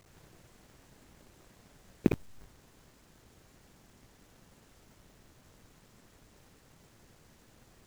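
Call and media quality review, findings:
Buffer tearing, whole clip: steady robotic buzz at 50 Hz riding on the speech. Output ring buffer out of sync; playback crossing the write point each period, so around half of every buffer replays audio from roughly 70 ms back. 50 Hz fits a 20 ms period.

Periodic USB or driver dropouts, 0.08 s to 7.77 s: regular ticks every 0.062 s, around 150 of them. Something's blocking the USB bus or audio driver on a fixed timer, and each hit skips a couple of milliseconds of audio outright instead of filling with silence.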